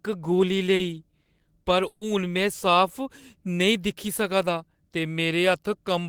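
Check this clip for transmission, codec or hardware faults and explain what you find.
Two packet-loss faults can be heard in this speech, both patched over by the receiver's concealment.

At 0.75 to 0.81 s there is short concealed packet loss. About 40 ms of the stream arrived too late for the decoder. The receiver bridged the hole by extending the sound it last had, then cross-faded back into the real signal. It comes across as a brief smear or wobble, and a short consonant may go missing.

At 1.87 to 2.03 s there is a burst of packet loss. Here 140 ms went missing in one run. The receiver kept extending the last sound across the whole gap, fading it as the gap went on, with no drop to silence. A voiced sound turns into a held buzz, an unvoiced one into a dying hiss. The speech then resumes further on, with the lost stretch simply skipped.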